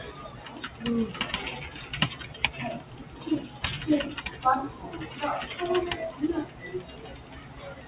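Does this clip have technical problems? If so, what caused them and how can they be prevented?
Yes. A speech-tuned noise suppressor stayed active on this non-speech audio, treating steady content and decays as noise, so levels pump and flutter by around 10 dB throughout. To prevent it, disable noise suppression or switch to a music mode when sending anything other than speech.

The same noise suppressor also cut specific sounds: at 0.28 to 0.5 s (about 5 dB), 2.8 to 3.13 s, 6.46 to 6.63 s, and 6.87 s to the end (each about 6 dB), sustained parts sink. To prevent it, turn the suppressor off for this content rather than relying on its threshold.

The narrowband top, with nothing above 4 kHz, reflects the call path and fits a G.711-type codec.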